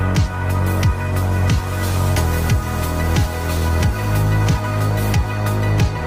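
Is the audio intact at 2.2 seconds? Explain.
No. At about 2.17 s the audio jumps straight forward, with no silence where the break occurs. Roughly a second of material is simply gone, and the sound on either side of the cut is joined almost directly, so it lurches rather than pauses. This is a skip ahead: a stretch of audio was discarded, either in transit or by an overflowing jitter buffer, while later audio was already queued, so playback resumed about a second further on.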